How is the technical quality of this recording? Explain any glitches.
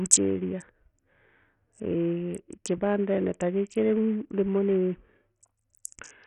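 The recording has heavy, constant codec damage. Throughout, the speech sounds gritty, with flickering treble and coarse noise riding on it, likely from Bluetooth SBC compression at a starved bit pool that fits about 48 kbps. Unlike MP3's swirly artefacts, this grit is broadband and unshaped.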